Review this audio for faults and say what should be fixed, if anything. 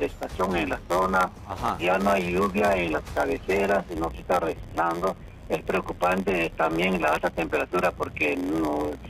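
A block size mismatch (padded) runs through the whole clip. Each block read comes up short and is filled with zeros, leaving a gap in every block that buzzes at 86.1 Hz, which fits a 512-sample read block. The audio also plays slow, at 0.938 times speed. Random dropouts would be irregular, but these gaps are evenly spaced. A mismatch that cut blocks short instead of padding them would make the audio skip ahead, not slow down. Matching the block sizes of the writing and reading stages, or buffering between them, would prevent it.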